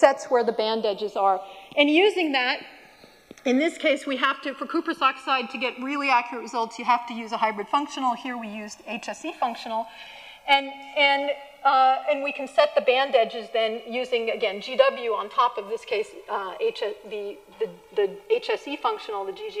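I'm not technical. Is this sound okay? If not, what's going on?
No. The two channels are drifting apart, from the start to the end. They behave as if recorded by two devices on separate clocks that disagree by about a hundred parts per million, so one side slowly falls behind the other, reaching a lag of roughly two milliseconds by the end. When the sides are combined, certain frequencies cancel, and those cancelled spots slide steadily, heard as a slow, swirling flanging sweep.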